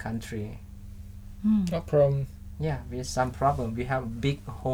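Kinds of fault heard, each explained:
No faults turn up anywhere in this one, so there's nothing to list here.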